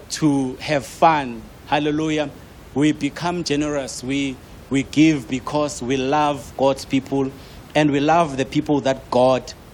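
There are no technical faults in this speech clip to describe in time order.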